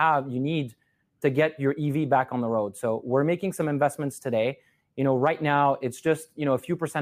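A speech recording, with nothing technically wrong with it.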